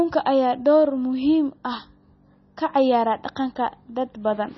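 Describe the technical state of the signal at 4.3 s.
At 4.3 s the speech carries MP3 compression damage, as it does for the whole clip. The likely cause is an encoder so starved of bits that it discarded the treble outright, leaving nothing above about 5.9 kHz, and dropped weaker frequency lines that then flicker in and out between frames. The damage is heavy, which fits a low bitrate near 24 kbps. The result sounds dull and watery, with swirling, smeared consonants and sibilance.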